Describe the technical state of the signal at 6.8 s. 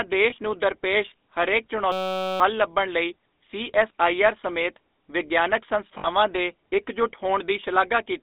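GSM full-rate codec damage is present at 6.8 s, as it is across the whole clip. The codec models the vocal tract and drives that model with a coarse, regularly spaced pulse excitation that keeps only a fraction of the detail, at a rate that fits 13 kbps. The result is a plainly audible buzzy, gravelly roughness on the speech, heard through a narrow line band running from about 250 Hz up to 3.7 kHz.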